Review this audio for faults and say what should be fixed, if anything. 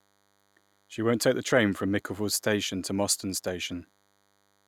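A thin, steady 100 Hz buzz rich in harmonics runs under the speech throughout, about 40 dB down: DECT cordless phone buzz, where the audio circuit rectifies radio bursts arriving every 10 ms. Moving the DECT handset and base station well away from the microphone, preamp and cabling, or using shielded balanced connections, would prevent it.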